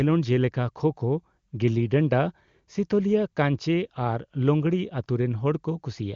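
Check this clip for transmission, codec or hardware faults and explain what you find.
No transmission, codec or hardware faults are audible in this speech, which passes through the AMR wideband (HD Voice) codec at 23.85 kbit/s, a rate high enough to leave at most faint coding traces.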